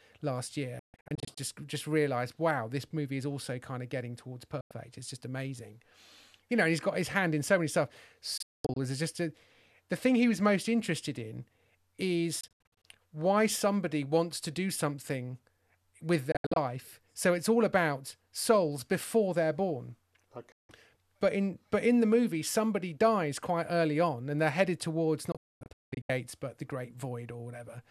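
Seven digital broadcast dropouts break up the speech, at 0.79–1.38, 4.61–4.71, 8.38–8.77, 12.41–12.85, 16.32–16.57, 20.52–20.70 and 25.32–26.10 s. The receiver is losing frames and muting with a 3 ms fade, so whatever was said in those gaps is simply gone. Most are clusters of short holes rather than one gap, with the longest silent stretch about 240 ms, in the last burst. The hole lengths step in 24 ms increments, which fits 24 ms frames.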